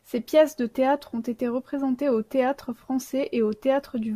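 Nothing goes wrong anywhere in this bit of speech; there's no technical fault to point to at any moment.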